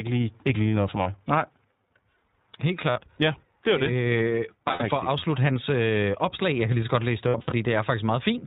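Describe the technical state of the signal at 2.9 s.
At 2.90 to 2.98 s there is a dropout of lost iLBC frames, a gap consistent with about three missing 20 ms frames. The decoder conceals it by repeating the last pitch cycle mixed with noise, so it sounds like a held, slightly buzzy vowel. Speech resumes almost immediately afterward.

Underneath, the iLBC codec is plainly audible. The speech is band-limited to 4 kHz and has a rough, synthetic edge from frame-by-frame excitation coding, which fits the 15.2 kbps mode with 20 ms frames.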